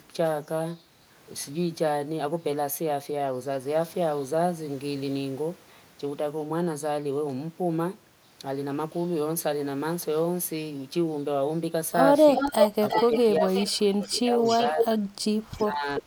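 Echo leak first shows up at 12.35 to 13.65 s: a copy of the speech coming back about 0.36 s late and only a little quieter than the talker, likely because the far end's echo canceller, with a loudspeaker playing, let some of its mic pickup through. It returns at 14.02 to 14.13 s (faint), 14.44 to 14.98 s (as loud as the speech itself), 15.51 to 15.64 s (barely there) and 15.96 to 16.01 s (fairly quiet).

Speech suppressed in double talk overlaps this from 12.94 to 15.07 s. With both sides talking, the canceller likely couldn't tell the talker from the echo and ducked everything, so the speech dips in chunks by up to around 25 dB for roughly a second and a half in total. It happens again at 15.64 to 16.06 s, with drops of around 20 dB over about a third of a second.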